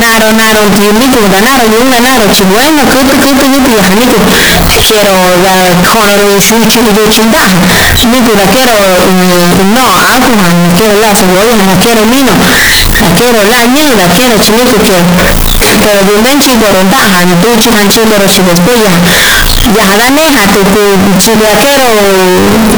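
From start to finish, the samples appear to have been decoded with the wrong format, most likely 32-bit floating-point data read as 32-bit integers: a float read as integer. Each sample's sign and exponent bits then dominate its value, so the waveform is forced into a near-square shape sitting at an almost fixed, high level. The speech comes out extremely loud and harsh, with background noise as loud as the talking, though the pitch contour stays traceable.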